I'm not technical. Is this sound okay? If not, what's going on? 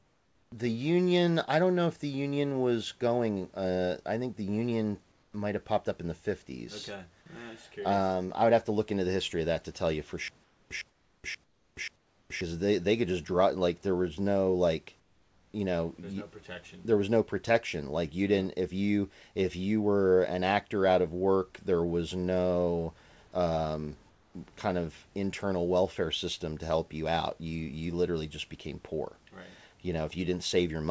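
No. Stutter with silent gaps, from 10.28 to 12.41 s, starting after "to tell you for" and ending before "they they could just": a tiny scrap of sound, about 0.11 s long, plays four times, once every 0.53 s, with dead silence of about 0.43 s in between. The likely cause is that playback stalled and kept replaying its last fragment before running empty, so whatever was said in that stretch is lost.

Comfort noise in place of the background, at 0.0 to 0.52 s, 5.12 to 5.34 s, 10.44 to 10.70 s, 10.90 to 11.24 s, 11.44 to 11.76 s, 11.96 to 12.30 s, 15.0 to 15.54 s, and 24.10 to 24.34 s (between "there was no um" and "kind of internal welfare"): in these pauses the real room sound is swapped for a flat, slightly quieter hiss. This is likely because the sender stops transmitting when nobody talks, and the receiving end fills the gap with made-up noise.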